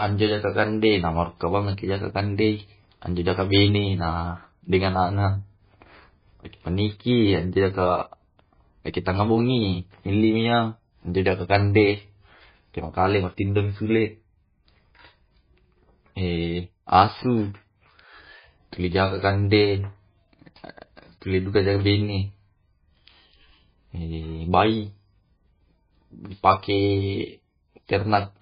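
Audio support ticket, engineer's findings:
MP3 compression, throughout. Symptom: speech band-limited, nothing above 5 kHz; watery, swirly texture; metallic chirps on s sounds; smeared consonant attacks. Likely cause: starved MP3 encode, consistent with a very low bitrate near 17 kbps. Encoder cuts treble at fixed point, drops weak frequency lines that flicker frame to frame. Damage heavy.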